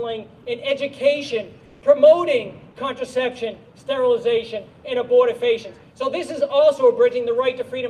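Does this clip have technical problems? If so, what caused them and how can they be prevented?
Yes. From 1.65 to 1.81 s, the background becomes flat, detail-free hiss, about 1 dB quieter. This is comfort noise in place of the background, likely synthesized during Opus DTX pauses. Turning off discontinuous transmission in the encoder prevents it.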